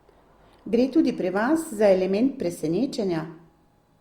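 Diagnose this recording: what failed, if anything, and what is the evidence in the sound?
A steady buzz at about 43 Hz runs through the whole speech clip, with the pace and pitch sounding essentially normal. This is a block size mismatch (truncated) at the driver or buffer stage: each block loses its tail, and the buzz rate fits 1024-sample blocks.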